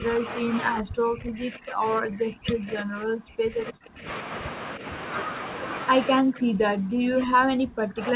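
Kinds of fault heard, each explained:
Speech suppressed in double talk: The speech dips, briefly by about 5 dB, and from 0.72 to 4.08 s and 6.21 s to the end by about 40 dB, nearly cutting out. An echo canceller likely mistook the talker for loudspeaker echo during overlapping talk.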